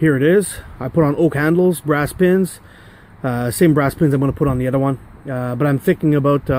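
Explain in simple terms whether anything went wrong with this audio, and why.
Nothing went wrong with this audio; there is no fault to point to anywhere in it.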